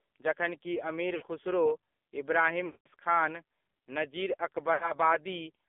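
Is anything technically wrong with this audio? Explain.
Yes. The whole clip has passed through an AMR narrowband mobile codec, and three bursts of lost AMR speech frames interrupt the speech.

Throughout, the speech is confined to roughly 250 Hz to 3.5 kHz. AMR-NB samples at 8 kHz and rebuilds speech from a vocal-tract model excited by a few pulses per subframe. The codec damage is heavy, which fits the 5.9 kbps mode. Consonants lose their top end, and voiced sounds come out buzzy and synthetic.

The frame losses fall at 1.16–1.25 s (60 ms), 2.66–2.88 s (200 ms) and 4.74–4.92 s (80 ms). When frames are lost, the decoder repeats the last good pitch and spectral settings with falling gain. The two short gaps, which fit three and four 20 ms frames, give a smeared, warbling dip. The 200 ms gap stretches the sound and fades it to silence before speech returns briefly weak or rough.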